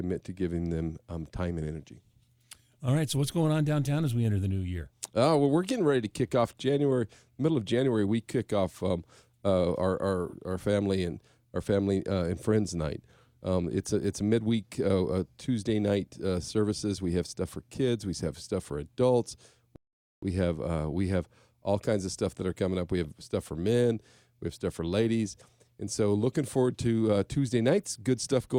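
At 19.76 s the speech just stops dead and goes silent until 20.23 s, then picks up exactly where it left off. That's a rebuffering stall: the player ran through everything it had downloaded and had to sit and wait for more data before carrying on. Nothing gets skipped or dropped, so the speech is intact, but you're left with an unnatural gap of about 0.47 s stuck into it.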